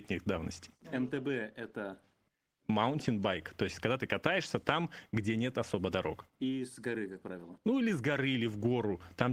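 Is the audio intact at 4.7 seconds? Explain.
Yes, at 4.7 seconds the speech plays through intact, with no dropout, click, distortion or other fault at that moment.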